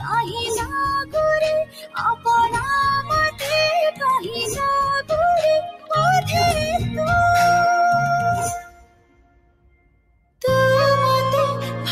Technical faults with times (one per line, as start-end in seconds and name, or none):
0.00-11.92 noise suppressor applied to music or sounds
0.00-0.39 sound cut by the noise suppressor
1.64-2.26 sound cut by the noise suppressor
3.30-3.47 sound cut by the noise suppressor
4.19-4.61 sound cut by the noise suppressor
5.71-5.92 sound cut by the noise suppressor
8.58-10.41 sound cut by the noise suppressor